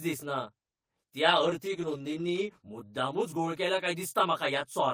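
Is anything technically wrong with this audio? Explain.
Yes, two faults are audible.

Throughout the clip the speech sounds rough and slightly doubled. This is channel delay (comb filtering): one channel lags the other by roughly 20 ms, and the mono sum cancels at evenly spaced frequencies, starting near 20 Hz.

From 1.27 s to 3.59 s the speech turns rough, watery or muffled, and it is at its worst for about 1 s. This is a call bitrate drop. The encoder was given far fewer bits, which fits a fall from 32 to 14 kbps, so it coded more coarsely and trimmed the highs.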